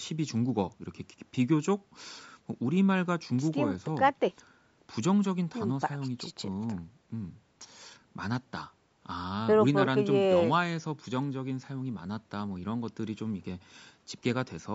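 No technical faults are audible.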